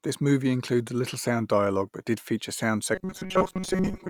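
From 2.95 s to 4.10 s the speech takes on robotic sound from repeated short buffers: a rigid, metallic buzz at 188 Hz that loosely tracks the words. Short buffers of about 5 ms were likely looped while most incoming audio was skipped. Unlike dropouts, the gaps are filled.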